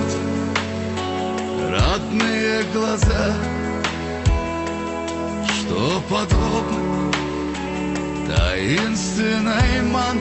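No technical fault can be heard anywhere in the audio. Nothing in the recording calls for a correction or points to a problem in the chain that produced it.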